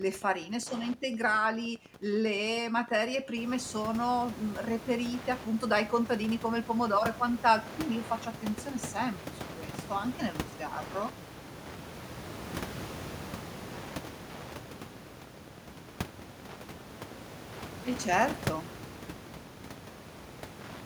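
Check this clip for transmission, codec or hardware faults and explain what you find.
One hardware fault runs through the whole recording: Wi-Fi interference. A nearby Wi-Fi radio couples into the audio circuit, which rectifies its beacon transmissions. The result is a steady tick every 102.4 ms, just under ten per second, sitting roughly 20 dB below the speech. Mains hum is a continuous low tone. This fault is instead a train of sharp, evenly spaced clicks, and that fixed radio-beacon rhythm identifies it. The room noise, which rises by about 12 dB near 3.5 s but stays some 15 dB below the speech, is part of the recording, not a fault.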